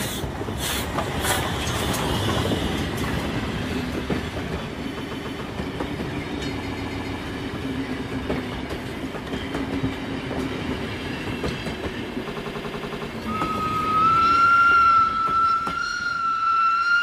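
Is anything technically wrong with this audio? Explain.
Yes. Repeated frames occur at 4.99–5.41 s, 6.62–7.18 s, 12.31–13.05 s and 14.54–14.68 s. Short compressed blocks of about 139, 139, 93 and 70 ms replay several times, causing a stutter. Unlike a dropout, nothing is lost; the audio just gets longer.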